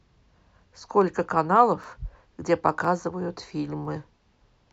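Speech with overlapping chunks: at 0.83, 1.84, 2.85 and 3.85 s, each new one-second chunk starts 7 ms early, so that slice plays twice and clicks. A spectrogram shows thin vertical broadband lines there, and the waveform shows a repeated segment with a step.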